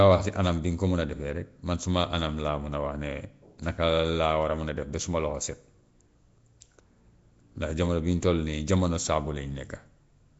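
Speech with Nellymoser compression damage throughout. The voice carries a coarse, hissing fringe and sounds blurred, as if underwater. Nothing is present above 7.7 kHz. The likely cause is Flash's microphone codec filling bit-starved bands with noise, which fits roughly 32 kbps.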